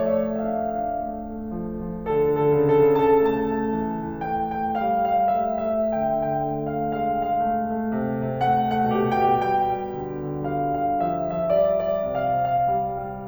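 From start to finish, the music carries a doubled audio track, most likely from a second capture path or an edit that left two copies running out of step. A full-band duplicate trails the original by roughly a third of a second at about equal loudness, so every attack is heard twice in quick succession. Because the copy carries no decay or room colour, it lands as a crisp, flat slapback rather than a natural echo, smearing rhythm.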